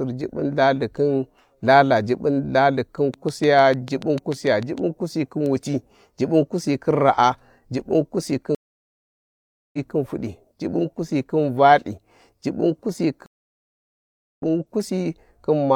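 From 3.14 to 4.79 s, a train of clicks runs through the speech, most likely from interference from nearby equipment or a faulty connection or power supply injecting the same pulse over and over. About ten near-identical clicks arrive at a steady 6.7 per second, peaking about 5 dB above the speech. They come across as a regular ticking laid over the voice, and they stay audible in the gaps between syllables.

At 8.55 s, the stream connection drops and the player goes silent for 1.18 s before reconnecting and starting a new decoder mid-stream. When sound returns at 9.79 s, the speech has jumped ahead by roughly a second, so a stretch is simply missing. The same stream reconnect happens again at 13.26 s, with 1.12 s of silence before the audio picks up at 14.43 s, again about a second further on.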